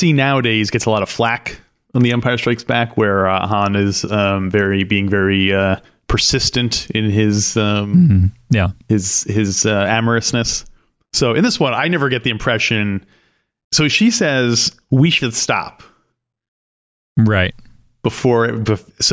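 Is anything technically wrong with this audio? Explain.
No, the signal holds steady throughout, with nothing in it that points to a technical problem.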